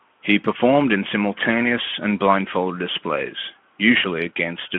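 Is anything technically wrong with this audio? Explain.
No, nothing here is technically wrong.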